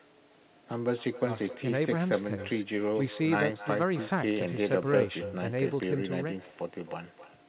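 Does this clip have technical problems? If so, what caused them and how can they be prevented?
Yes. Echo with no canceller runs throughout: the far-end loudspeaker feeds its microphone, returning speech about 16 dB down, roughly 0.3 s late. Enable echo cancellation or use headphones.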